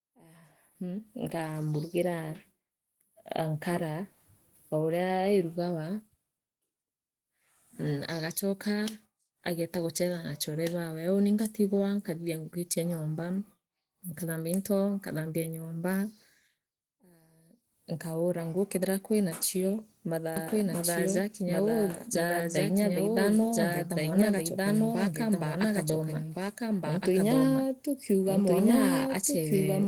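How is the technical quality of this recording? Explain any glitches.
The recording has two clear problems: low-rate compression damage across the whole speech clip, and a second copy of the audio running over the final stretch.

Opus voice compression, throughout: at 16 kbps in hybrid mode, a linear-prediction coder handles the lower band while a transform layer covers everything above 8 kHz. With so few bits, the excitation is coarsely coded, leaving the speech plainly muffled, rough and slightly robotic.

Doubled audio track, from 20.36 s to the end: the same speech abruptly appears a second time, about as loud as the original and roughly one and a half seconds behind. There is no decay or room colour on it, most likely a second capture through a slower path mixed back in.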